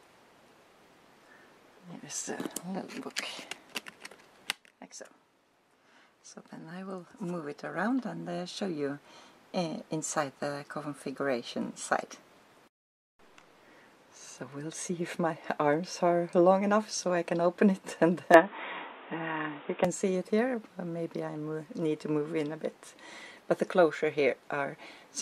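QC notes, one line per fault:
18.34–19.85 s, input switched to a poorer device: the sound turns dull and boxy, with nothing above 3.8 kHz, the level shifts by around 5 dB, and a new background hiss sits roughly 30 dB under the signal. There is no gap at the change. The likely cause is the input moving to a narrower-band microphone or headset profile. Unlike a plain low-pass filter, the tone, level and noise floor all change together, then clear up again.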